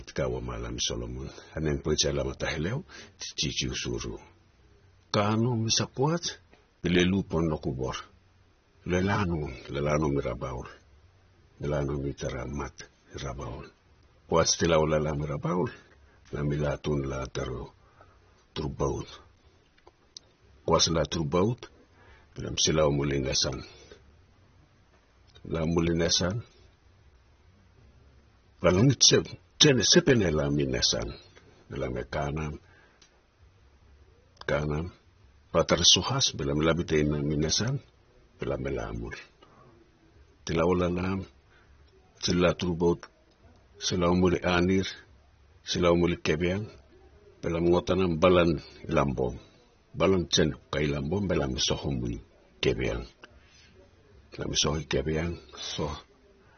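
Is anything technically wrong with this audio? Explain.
Yes. Throughout, the speech sounds dull and smeared, with a warbling, fizzy edge on sibilants and nothing above about 6.3 kHz. That points to AAC compression, likely AAC-LC at a low bitrate near 24 kbps, where the encoder drops the top band and starves the remaining frequency lines of bits.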